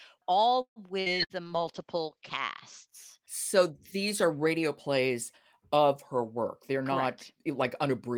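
At 0.61 to 0.79 s the sound stalls. The last sound is held and fades, then about 90 ms of silence follows before the speech resumes with nothing lost. This is a call audio freeze, likely from delayed packets draining the jitter buffer, and it adds about 146 ms of delay.

Two bursts of packet loss follow, at 1.00 to 1.09 s and 1.24 to 1.33 s. In each, roughly 60 ms of speech went missing. The receiver bridged the gap by extending the last sound into a fading buzz or hiss for about 55 ms. Speech then jumps ahead, with that material gone.

From 1.43 to 2.93 s a call bitrate drop takes the encoder from 32 to 12 kbps, holding at the low rate for about 1 s. Opus narrows its audio band from 20 kHz to 8 kHz, so the speech turns muffled and coarse, with a watery edge, until the rate recovers.

Just after "radio plays of her", from 6.36 s to 8.17 s, a jitter buffer speed-up trims the backlog. The receiver cuts short pitch-period slices, about a tenth of a second in total. 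The speech runs about 5% fast at unchanged pitch and sounds slightly hurried.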